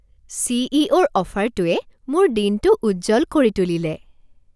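No technical faults can be heard anywhere in the recording.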